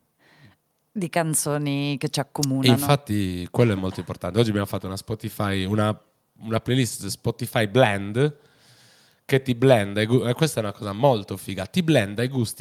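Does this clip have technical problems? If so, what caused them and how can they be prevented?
No technical faults here.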